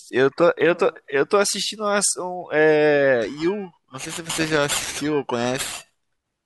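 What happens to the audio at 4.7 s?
At 4.7 s the speech has a rough, metallic edge, part of a stretch of periodic clock jitter running from 3.22 s to the end. Interference is shaking the converter's clock at around 2 kHz, adding sidebands at that spacing around every component, strongest on higher frequencies.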